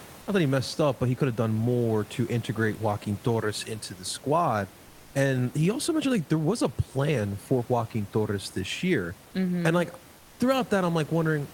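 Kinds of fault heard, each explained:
Comfort noise in place of the background: for 220 ms near 10.17 s the room noise turns steady, featureless and about 6 dB quieter, likely from discontinuous transmission. A noise gate would leave silence instead.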